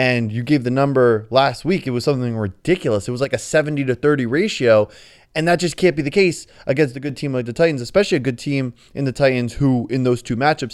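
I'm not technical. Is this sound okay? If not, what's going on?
No. One channel likely drops out briefly, so the speech suddenly gets quieter for a moment: from 3.24 to 3.33 seconds, and again from 6.95 to 7.10 seconds, right after "be the case against" and before "team like the".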